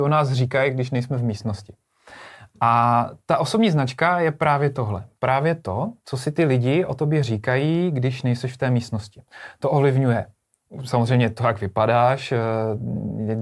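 Listening closely to this speech recording, nothing technically wrong stood out at any point.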